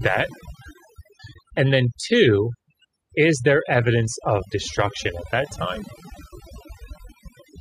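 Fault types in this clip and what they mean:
Overdone noise removal: a noise reduction stage set far too aggressively runs across the whole clip, so any frequency band sitting close to its noise estimate gets cut hard or switched off, and softer parts of the speech are removed along with the noise. The pauses fall to near silence dotted with twinkling specks. A spectrogram shows a dark, empty floor with scattered isolated bright dots and ragged, gappy edges around the speech, while the waveform shows unnaturally flat silences between phrases.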